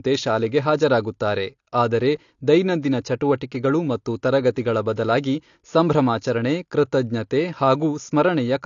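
From start to finish the speech is dull, with nothing above about 7.1 kHz, and sibilants and held vowels carry a warbling, fizzy texture. This is likely AAC compression, and the degree of damage fits a low bitrate around 32 kbps. A plain low-pass filter would only remove the top end. Here the coding also smears the sound in time, and that swirling quality sets it apart.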